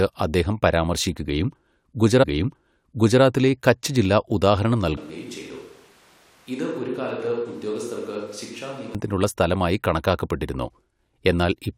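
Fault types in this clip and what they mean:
Stream segment repeated: About one second of speech, 2.22 to 3.22 s, plays a second time, with a small blip at the jump back before "കച്ച് ജില്ല ഉദാഹരണം".
Switch to a distant microphone: From 4.97 to 8.95 s the speech turns roomy and hollow, drops about 10 dB, and gains background noise, likely from a far pickup replacing the close one.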